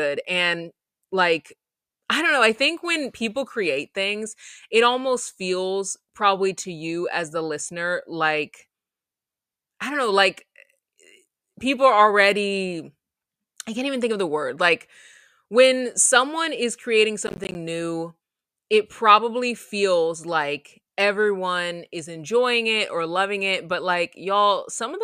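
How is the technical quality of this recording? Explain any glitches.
One glitch stands out: a burst of processor overload crackle from 17.27 to 17.55 s, between "when someone is creating" and "new it probably feels". The processor missed about ten buffers of roughly 10 ms each, leaving hard-edged silent gaps that merge into gritty tearing. A single dropout would be one clean hole; here the rapid cluster of repeated gaps is what sounds like crackle.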